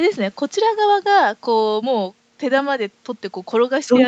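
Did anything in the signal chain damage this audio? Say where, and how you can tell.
No, nothing stood out on listening; the call processing and the Opus link hold the sound below 8 kHz, which is what that path is expected to do.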